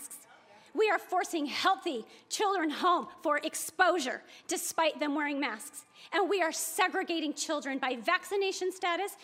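A nearby 2G handset, exchanging signalling with its network, sends short groups of radio bursts that the audio circuitry rectifies into the signal path. This produces GSM signalling bursts from 7.73 to 8.46 s: a galloping dit-dit-dit of short buzzes pulsing at about 217 Hz. The interference sits roughly 30 dB below the wanted sound, so it comes through as a faint rhythmic chatter layered over the audio for under a second.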